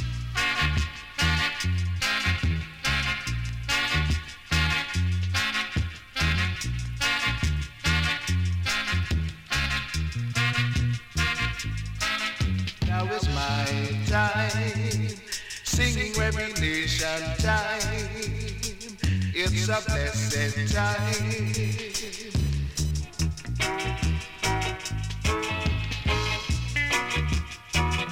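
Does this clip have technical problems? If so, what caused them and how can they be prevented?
Yes. From 20.16 to 22.91 s a whining, chirping buzz pulsing at around 1 kHz sits roughly 20 dB below the sound. This is computer activity noise: processor or graphics load shifting the shared ground of the audio circuit. Using an external USB interface or a ground-loop isolator prevents it.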